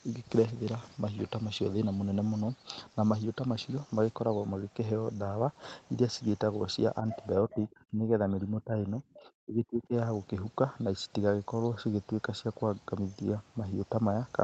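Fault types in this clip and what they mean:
Other side's voice leaking through: a short scrap of a second voice appears at 7.1 s, lasting about 70 ms and sitting roughly 10 dB under the main speech. This is most likely loudspeaker playback getting back into the microphone, with the echo canceller missing a bit of it. It's brief and fairly quiet, more a flicker than a clear phrase, but it's distinct from the talker, and it comes right before the trouble that follows.
Speech suppressed in double talk: from 7.45 to 9.93 s the talker's speech keeps getting pulled down, at its worst by something like 20 dB, with about two seconds of that stretch affected in total. The speech sinks and comes back in pieces instead of holding steady. The likely cause is both ends talking over each other, so the echo canceller couldn't tell the near voice from the echo and pushed everything down together.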